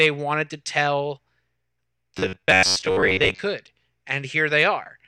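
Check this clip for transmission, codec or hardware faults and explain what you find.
One fault, robotic sound from repeated short buffers, runs from 2.17 to 3.40 s. New audio likely arrived too seldom, so roughly 10.7 ms stretches were looped to fill gaps, imposing a fixed 93.8 Hz buzz. With most of that span repeated, the speech becomes a rigid metallic drone.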